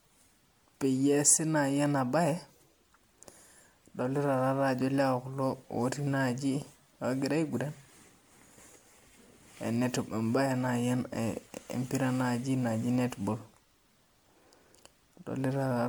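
Speech with generation loss throughout: swirly, hollow and smeared, with soft attacks, likely from around five rounds of MP3 re-encoding at what sounds like 96 kbit/s.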